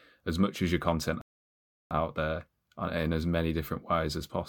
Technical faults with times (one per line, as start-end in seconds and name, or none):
1.21-1.91 playback stall